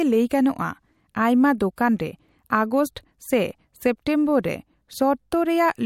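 Pre-echo at 1.76 s and 4.42 s: the codec's quantisation noise, spread across a block of about 26 ms with no switch to short blocks, leaks ahead of each speech attack as roughly 19 ms of hiss, about 19 dB and 15 dB above the preceding quiet, softening the onsets.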